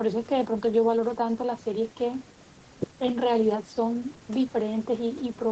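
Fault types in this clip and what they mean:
No faults can be heard in this speech clip. The top end stops at about 8 kHz, which is what the call codec and its microphone processing normally leave.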